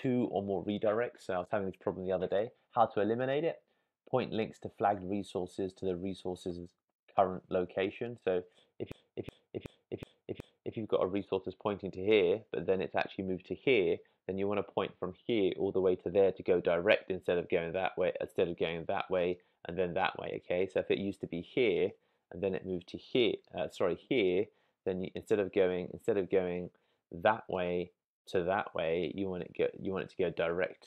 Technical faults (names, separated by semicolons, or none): system hang loop